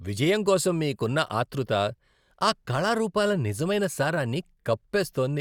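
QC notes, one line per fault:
No faults found on the speech track; nothing to log.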